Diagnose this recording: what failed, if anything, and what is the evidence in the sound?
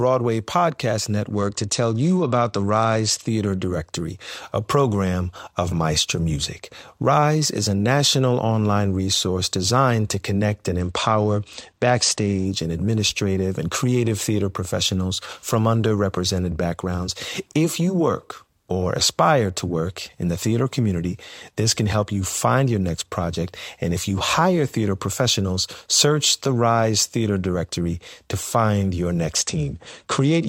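The Bluetooth codec stage is at fault, with three Bluetooth SBC bit pool drops in this speech. From 1.34 to 3.28 s, from 10.80 to 12.45 s (after "designed to connect and", recovering by "and administrative and creative") and from 29.40 s to the end (after "to find your"), the top end goes dull and gritty noise creeps in. That fits the link falling from a bit pool of 28 to about 11, roughly 90 kbps, so the upper sub-bands get starved and everything else is coarsely quantised.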